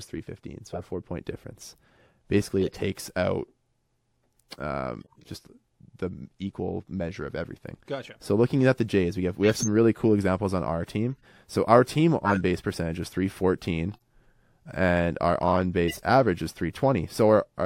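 Damaged compressed frames were decoded as if intact. In this speech clip, flipped bits made the decoder rebuild a few frames at a time with wrong gains and misread codes, spraying energy into the wrong frequencies. The result is corrupt frame decoded: brief chirps and noise bursts at 0.73–0.83, 2.61–2.78, 5.01–5.27, 9.44–9.67, 11.20–11.25, 12.25–12.40, 13.92–14.01 and 15.88–16.00 s. They range from a faint error peaking near -50 dBFS at 11.20 s to the loudest bursts, peaking near -10 and -5 dBFS, around 9.44 and 12.25 s.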